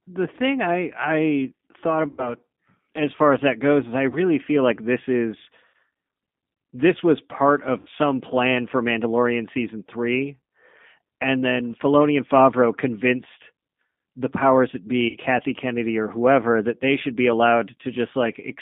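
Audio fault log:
Throughout: G.729 codec. Audio is confined to about 150 Hz to 3.6 kHz and sounds rough and synthetic, which fits 8 kbit/s pulse-based speech modelling.
2.08–2.34, 4.10–4.18, 5.68–5.74, 7.79–7.89, 15.09–15.17 s: VoIP packet loss concealed by the speech codec. After "thing I I thought" and other gaps, the decoder extrapolates a buzzy tone or coloured noise that fades, and the voice recovers slowly.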